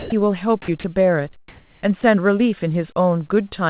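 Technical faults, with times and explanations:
0.00–0.12 s, 0.62–0.68 s, 0.80–0.84 s and 2.01–2.03 s, sound dropped by the voice detector: the speech gives way to flat, steady noise for 120, 60, 40 and 20 ms. About 80, 40, 40 and 20 ms of real speech go missing. The sender's detector likely judged quiet speech to be background and stopped sending, so the receiver played comfort noise. Packet loss would instead stretch the previous sound. Here the speech simply drops out into featureless hiss and then returns.
0.94 s and 3.49 s, short concealed packet loss: about 20 ms of audio never arrived each time. The decoder filled the gap by extending the last sound and then blending back into the real audio, so each spot is a brief smear or wobble. A gap from the voice detector would cut to flat noise instead. Here the sound carries on across the hole and nothing is swapped for hiss.
1.48–1.82 s, comfort noise in place of the background: during this pause the real background, sitting about 37 dB below the loud parts, is likely replaced by synthetic noise for 340 ms. 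That noise is smooth, lacks detail and differs in level by about 5 dB. No speech is lost here, which separates it from the detector dropouts. The change shows only in the character and level of the background, all of it confined below 4 kHz like the rest of the band-limited call audio.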